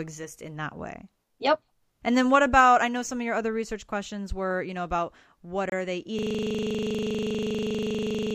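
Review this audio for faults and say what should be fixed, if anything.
Bluetooth stall, 5.70 to 5.72 s, just after "you know about what": a 26 ms silence, likely from interference delaying packets until the headphone buffer ran empty, before "are they" resumes. To prevent it, reduce radio interference or enlarge the receiver's jitter buffer.

System hang loop, 6.19 s to the end, after "about what are they": one 40 ms slice repeats about fifty times, a rigid 25 Hz stutter-buzz from hardware recycling a frozen ring buffer. To prevent it, fix the stalling driver or process, or have the audio path output silence when the buffer stops updating.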